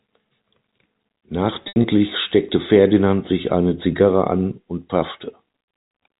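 From 1.64 to 1.84 s the speech turns briefly buzzy and held, as if a sound were stuck for a moment, with short dips where it thins toward silence before picking up again. This is packet loss with pitch repetition: about 120 ms of audio went missing, scattered over those 200 ms, with the longest gap 80 ms. The receiver filled each hole by repeating the last pitch period and fading it, which gives the frozen, droning quality, all within the 4 kHz telephone band of the G.711 line.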